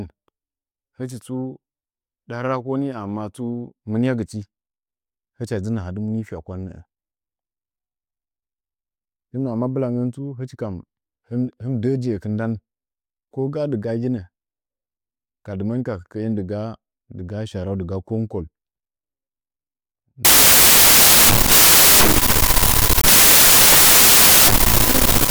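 Speech that turns into loud, harsh broadband noise from 20.25 s to the end at 25.30 s: samples built from the wrong bytes, assembled wrongly so low bits dominate each value.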